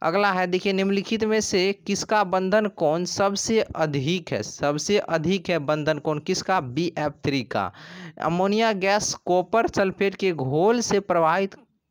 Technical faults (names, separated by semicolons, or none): sample clock jitter